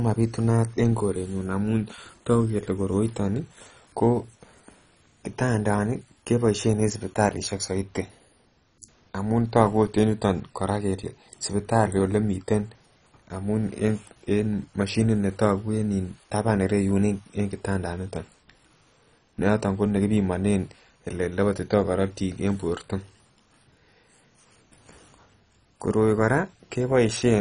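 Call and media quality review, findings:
Speech dull and gurgling throughout, granular grit, upper bands flickering in and out, nothing above 10.4 kHz. Likely MP2 compression: Layer II sub-bands starved of bits, upper ones switched off, rest coarsely quantised; fits 32 kbps.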